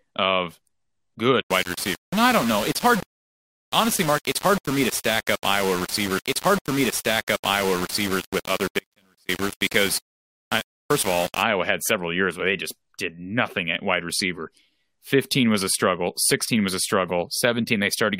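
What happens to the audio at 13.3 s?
Nothing goes wrong at 13.3 s: the speech carries on intact through that moment, with no dropout, click or distortion.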